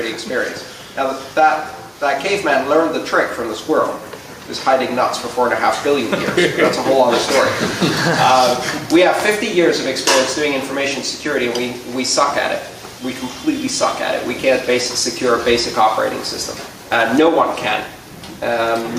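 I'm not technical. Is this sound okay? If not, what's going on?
No, there's gain pumping the whole way through: the level keeps dipping on loud moments and creeping back up after, likely from the input being set too hot.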